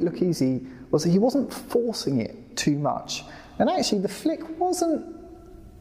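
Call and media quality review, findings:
Nothing stood out on listening; no findings to log for this clip.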